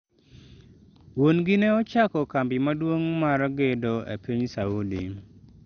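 A speech clip with MP2 compression damage from start to finish. Nothing is heard above 6.5 kHz, so it sounds dull. The remaining bands gurgle and sound granular from coarse quantisation. This likely comes from MPEG Layer II coding at a low bitrate, which fits about 48 kbps.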